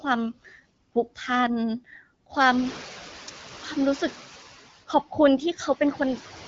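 Noise suppressor artifacts run through the whole recording. The suppressor estimates which frequency bands hold steady background noise and pulls them down frame by frame, by about 8 dB here. The result is a floor that dips in the pauses and swells back beneath the speech. The speech itself is heard over a light HD Voice band that stops near 7.5 kHz.

The noise suppressor catching up is audible from 2.37 to 4.17 s. Around 2.5 s the room noise jumps by about 16 dB, settling roughly 19 dB below the speech, and the suppressor's noise estimate lags behind the change. The louder background first comes through with only about 5 dB of reduction, then sinks gradually over about 1.8 s as the estimate adapts.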